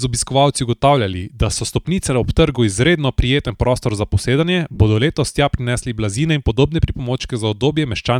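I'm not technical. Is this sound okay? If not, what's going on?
No. The speech has two short dropouts from lost LE Audio frames, at 4.74 to 4.79 s (about 50 ms) and at 7.22 to 7.24 s (15 ms). Bits of the wireless signal went missing. The decoder briefly filled each gap with a noisy guess, so the sound smears there.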